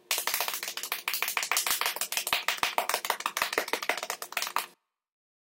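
From start to finish the audio runs at the wrong sample rate. Everything plays 1.5 times too fast and sits about 7 semitones high, roughly a fifth, which fits material recorded at 32 kHz being played back at 48 kHz without conversion. Sounds come across as hurried and thin. On a spectrogram, every component sits 1.5 times higher than it should. In the waveform, each event is squeezed to two-thirds of its proper duration.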